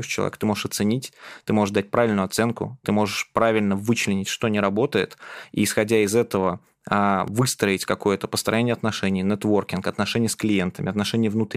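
A sharp tick at 7.28 s, just after "исходя из этого а", is a block of digital silence: about 1 ms dropped out, likely from an output buffer not filled in time.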